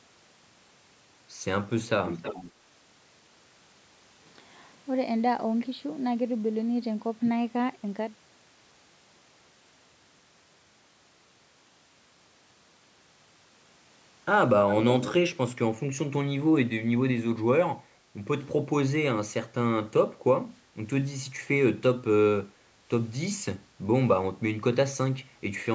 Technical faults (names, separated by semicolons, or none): echo leak